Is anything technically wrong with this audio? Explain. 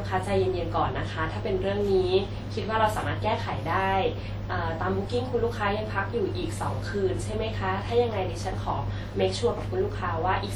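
Yes. Throughout the speech there is plainly audible WMA compression damage, likely from encoding with Windows Media Audio at a rate that fits about 48 kbps. The transform codec quantises each long block coarsely, smearing noise across tens of milliseconds and discarding weak components. The result rings and sounds washy, with a hiss that swells and fades alongside the voice. A spectrogram would show blotchy, time-smeared energy with holes where quiet lines were zeroed, and nothing above 20.1 kHz.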